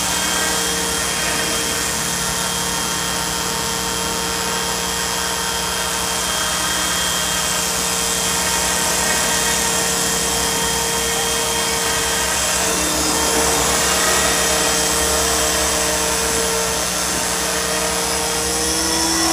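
Mains buzz runs throughout the clip, loud and only a little below the wanted sound. Sharp switching spikes from a 60 Hz supply leak into the signal path twice per cycle, stacking harmonics up into the kilohertz range and producing a steady, raspy buzz.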